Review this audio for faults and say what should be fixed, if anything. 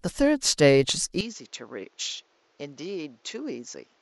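At 1.21 s the recording likely switched its input to a poorer device, which holds to the end. The speech turns duller, with nothing above 7.6 kHz, drops about 10 dB in level, and gains a new background noise, with no gap at the change. Locking the input to one chosen microphone would stop this.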